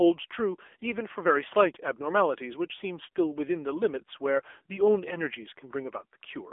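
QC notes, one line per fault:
Throughout: AMR narrowband mobile codec. The speech has passed through AMR-NB at 7.95 kbps, and the codec damage is plainly audible as a buzzy, synthetic edge to the voice, because each frame is rebuilt from a vocal-tract filter excited by a handful of pulses rather than the original waveform. The band is held to a telephone line of roughly 300 Hz to 3.5 kHz. On a spectrogram, nothing appears above 3.7 kHz, and a sharp ceiling cuts off the upper sibilance and air.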